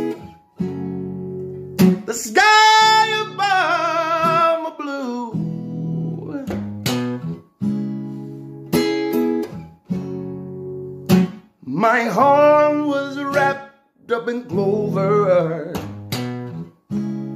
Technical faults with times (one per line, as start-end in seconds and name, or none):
none